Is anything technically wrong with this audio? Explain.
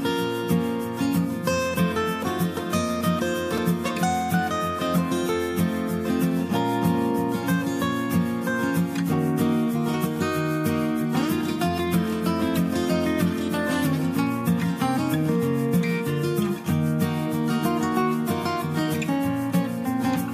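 Yes, there is a repeated buffer at 3.58 s. The audio arrived late, so the output played its last 2.9 ms block again, consistent with a 128-sample buffer, one extra time. It sounds like a tiny click. The waveform shows an identical short segment twice with a sharp seam, and the spectrogram shows a thin vertical broadband line.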